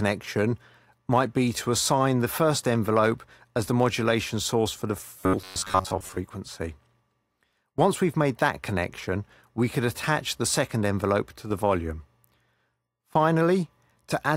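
From 5.18 to 6.17 s the sound turns into a rigid, metallic buzz locked at about 93.8 Hz, tracking the underlying audio only loosely. This is robotic sound from repeated short buffers, likely caused by new audio arriving too seldom, so playback fills the gaps by looping a fragment of roughly 10.7 ms. That loop length sets the fixed buzz pitch, and for most of the stretch the real audio is skipped rather than heard.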